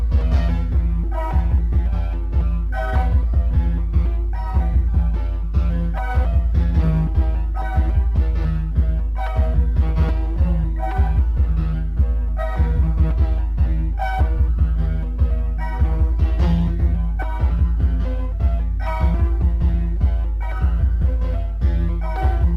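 Sample clock jitter affects the whole clip. The converter's timing wanders by around five microseconds, adding a fine hiss roughly 45 dB below loud, bright passages. On a spectrogram this appears as a faint broadband haze that tracks the strongest high-frequency content and vanishes in silence.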